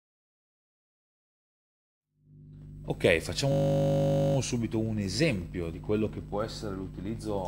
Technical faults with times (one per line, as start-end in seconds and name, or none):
3.52-4.36 system hang loop